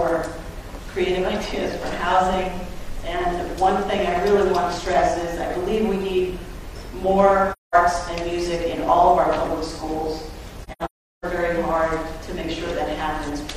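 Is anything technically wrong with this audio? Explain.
Yes. The audio has AAC frame loss with muting, twice. At 7.52 to 7.75 s the sound drops out for about 213 ms, which fits five lost frames. From 10.64 to 11.25 s there are gaps totalling about 512 ms, scattered over roughly 0.6 s. The longest run is about 0.4 s. This fits twelve lost frames. The decoder filled the missing frames with silence. Overlapping windows fade the sound out and back in. So each hole has soft edges.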